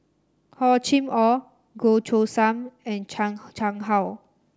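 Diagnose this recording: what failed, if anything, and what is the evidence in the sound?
Nothing failed in this speech recording, and the sound carries no evidence of a fault at any stage.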